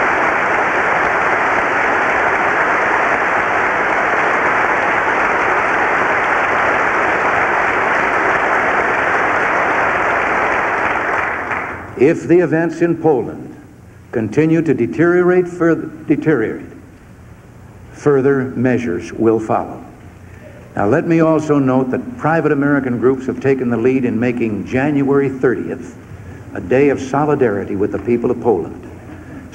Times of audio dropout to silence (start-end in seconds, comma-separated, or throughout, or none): none